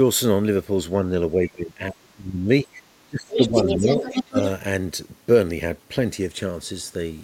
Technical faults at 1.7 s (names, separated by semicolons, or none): speech suppressed in double talk